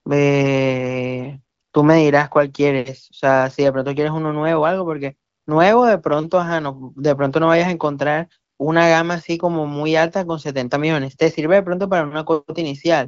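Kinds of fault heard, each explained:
No technical faults can be heard in this speech, which is carried over an AMR wideband (HD Voice) link at 18.25 kbit/s, with the audio band ending near 7.5 kHz as expected for that path.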